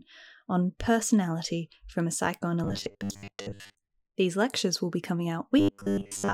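After "on personality from a", from 2.64 to 3.88 s, and after "lectures will be coming", from 5.58 s to the end, the speech becomes robotic sound from repeated short buffers: a rigid metallic 100 Hz buzz, likely a 10 ms chunk looping while most real audio is skipped. Spectrograms show evenly spaced 100 Hz harmonic stripes, and waveforms show identical repeating cycles.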